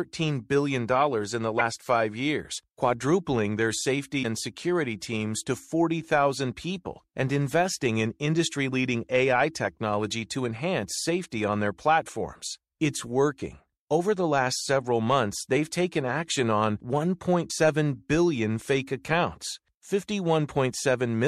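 Frames were likely dropped from an MP3 stream, so the decoder read borrowed bit-reservoir data from the wrong frame. This broken MP3 bit reservoir leaves a roughly 30 ms skip and glitch, about one 26.1 ms frame, in the speech at 1.58–1.61 s after "billion in the", at 4.22–4.25 s before "and security teams to", and at 17.49–17.52 s before "billion fake accounts".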